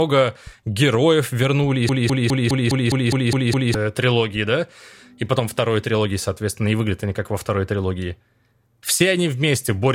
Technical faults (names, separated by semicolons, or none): broken-record loop